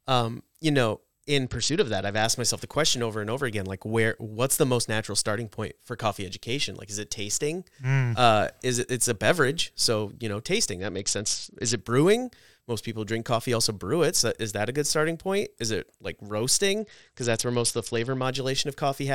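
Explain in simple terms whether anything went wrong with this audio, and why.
Three times the speech goes dull and gritty, at 1.44–2.24 s, 10.80–11.78 s and 16.79–18.23 s: a Bluetooth SBC bit pool drop, where a busy link starved the treble of bits.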